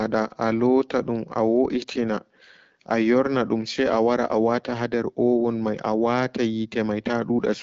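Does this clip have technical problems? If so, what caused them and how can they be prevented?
No, nothing stood out on listening to this speech clip, so there is nothing here that needs preventing.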